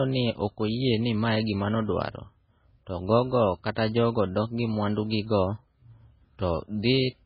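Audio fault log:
Throughout: MP3 compression, likely at a very low bitrate near 16 kbps. Nothing above 5.4 kHz remains. Weak bands flicker, giving heavy watery swirl.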